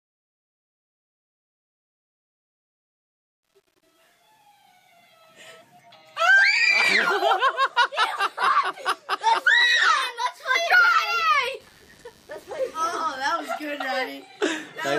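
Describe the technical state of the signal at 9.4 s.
At 9.4 s the signal is intact, with no audible fault at that point.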